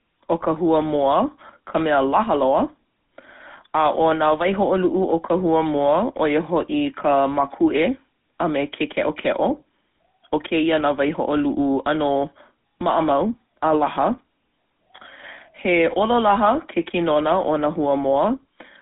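From start to finish the speech has a buzzy, gravelly roughness, squeezed into a narrow telephone band of roughly 200 Hz to 3.6 kHz with nothing above 3.8 kHz. That is the GSM full-rate codec, which fits 13 kbps: coarse pulse excitation of a vocal-tract model leaves that grain.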